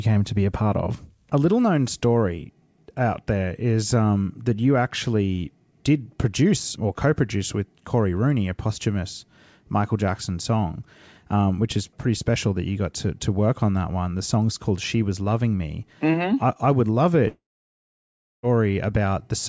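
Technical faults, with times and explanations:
17.28 to 18.45 s, long network dropout: right after "I I would love" the speech breaks off and roughly 1.2 s of audio never arrives. The receiver tries to cover the hole by stretching the last bit of sound into a short buzzy tail that fades. After that it gives up, and you get about a second of near silence before the audio picks up again with the lost part simply gone. That pattern is most likely a stall in packet delivery on the network.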